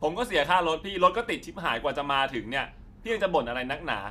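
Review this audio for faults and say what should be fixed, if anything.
No faults; nothing needs fixing.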